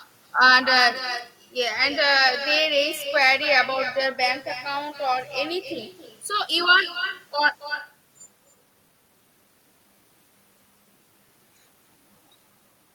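Throughout, echo with no canceller returns the speech about 11 dB quieter and roughly a third of a second late, appearing as quieter repeats trailing each waveform burst and spectrogram band.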